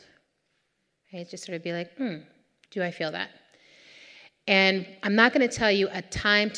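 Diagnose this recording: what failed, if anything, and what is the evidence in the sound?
Nothing in the recording points to a failure at any stage of the chain. The speech comes through with no audible defect to diagnose.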